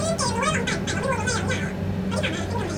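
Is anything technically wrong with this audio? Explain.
Yes. Throughout the speech, everything runs twice as fast and an octave high, with a chipmunk quality. This is audio read two samples at a time (double speed): each pair of samples is treated as one frame, halving the duration.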